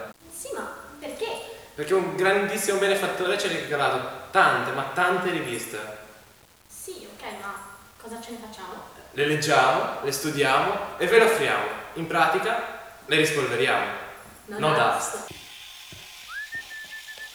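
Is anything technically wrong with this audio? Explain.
Yes. Throughout the clip there is grainy distortion that tracks the signal, sitting around 30 dB below it. Quiet passages turn gritty and the faintest parts sputter or drop out. The likely cause is low bit depth without dither, consistent with rounding to 8 bits.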